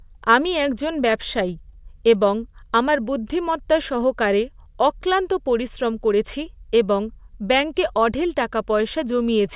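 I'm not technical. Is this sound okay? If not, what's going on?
Yes, nothing in this speech recording points to a technical problem with how the sound was captured, stored or played back.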